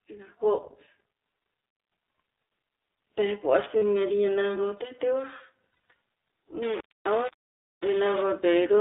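Speech carried over the iLBC codec, band-limited to roughly 300 Hz to 3.7 kHz and coded in 20 ms frames at a rate that fits 15.2 kbps. The codec damage is plainly audible as a rough, slightly synthetic texture, which sets it apart from a simple low-pass telephone filter that would sound muffled rather than coarse. Lost iLBC frames appear at 3.79 to 3.83 s, a gap of about 40 ms, and again around 5.89 to 5.90 s, where about 120 ms of loss is scattered across 160 ms with runs up to about 40 ms. Unlike a true dropout, these gaps are not silent. They are filled by a repeated pitch cycle that sounds like a held, buzzy vowel, and the voice snaps back immediately because each frame decodes on its own. From 6.62 to 8.23 s a grainy, signal-following distortion sits roughly 20 dB below the speech. Its likely cause is low bit depth without dither, with the audio rounded to about 6 bits. Background hiss would stay steady, but this grit rises and falls with the speech.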